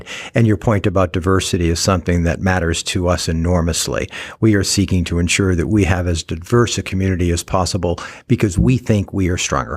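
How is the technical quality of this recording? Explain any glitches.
Listening closely, nothing in the recording stood out as a technical problem, so there are no glitches to explain.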